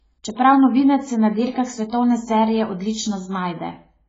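Throughout, the speech stops dead at 7.7 kHz, a flat ceiling on the spectrogram with nothing above it, and sounds dull. It is likely low-bitrate audio saved at a high bitrate: the cut-off fits a 16 kbit/s AAC source later re-encoded as 256 kbit/s MP3.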